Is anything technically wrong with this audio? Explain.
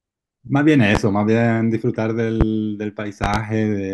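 Yes. Loud pops occur at 0.95–0.99 s, 2.41–2.45 s and 3.24–3.38 s (a double pop), peaking around 15 dB above the speech, likely from a voltage glitch. Each appears as a tall waveform spike and a bright full-band vertical stripe on a spectrogram.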